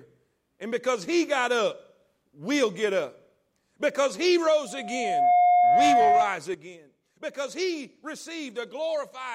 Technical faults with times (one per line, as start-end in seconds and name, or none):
4.66-6.35 loudspeaker feedback squeal
6.54-9.34 sudden gain jump